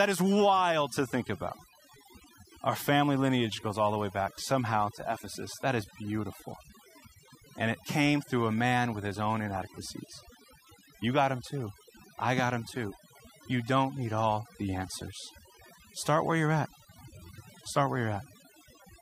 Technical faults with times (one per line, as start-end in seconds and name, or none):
0.00-19.01 overdone noise removal